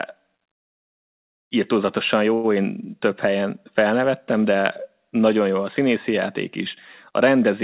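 Speech with a short stall from a late packet at 2.34 to 2.46 s: the jitter buffer ran dry and stretched the last sound for about 97 ms, losing nothing, before resuming.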